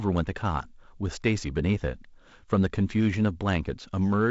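Speech carried over G.722 wideband telephone coding at 48 kbit/s, with nothing above about 7.7 kHz, and no technical fault can be heard anywhere in the clip.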